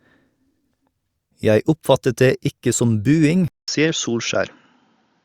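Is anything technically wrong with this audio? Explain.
Yes. At 3.48 s the speech cuts to silence for 0.2 s, then runs to the end duller, with nothing above 7 kHz, a faint new noise floor and the level unchanged. That points to an input switched to a poorer device, likely a narrower-band microphone path.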